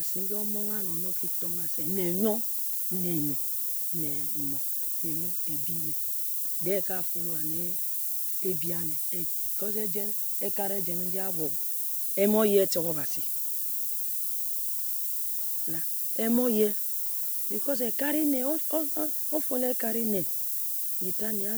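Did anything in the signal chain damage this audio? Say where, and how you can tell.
Yes: low bit depth with noise shaping throughout, from the sample-format conversion stage. The speech has been requantised to about 5 bits, and the rounding error was fed back to push it upward, leaving a steady, thin hiss that climbs toward the top of the band and sits roughly as loud as the speech itself.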